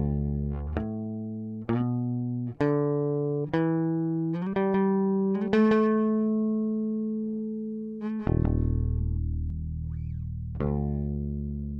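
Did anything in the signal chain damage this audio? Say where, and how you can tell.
Yes. From 4.74 s to 9.50 s there's a doubled audio track: a second full-band copy of the sound trailing around 200 ms behind, sitting about 5 dB under the original. You can tell because it's a clean repeat, with no decay tail or room colour like a real echo, and it cuts in and out abruptly at those two points. The likely cause is at the driver or routing stage, with the same signal captured twice through a slower second path and summed back in out of step.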